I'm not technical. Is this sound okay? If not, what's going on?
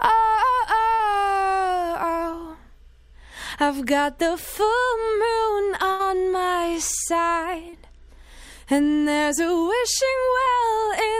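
No. Small parts of the audio got lost on their way over a network connection, and the receiving end had to invent sound to cover the holes.

The first problem is short concealed packet loss, at 2.31 to 2.35, 7.69 to 7.75, and 10.45 to 10.48 seconds. Each time, a small piece of the audio, 20 to 40 milliseconds long, never arrived in time. The receiver kept the last sound going briefly, then blended back into the real audio. You hear a quick smear or wobble, and a very short sound may disappear.

The second problem is a burst of packet loss, from 5.91 to 6.01 seconds. Here a longer piece went missing, about 80 milliseconds, and the receiver filled roughly the same stretch by stretching out the last sound while turning it down. That comes across as a held buzz or a fading hiss, and then the audio jumps ahead with that piece gone.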